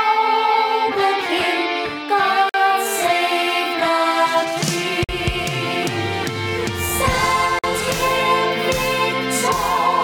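Gap between chunks at 2.49 to 2.54 s, 5.04 to 5.09 s and 7.59 to 7.64 s: the audio stops dead for about 48 ms at each point, and the holes recur every 2.5 s of sound. That spacing fits audio delivered in 2.5-second pieces, with silence inserted at each join, which points to codec padding or a player starting each piece late. Nothing is missing, but the flow breaks at every seam.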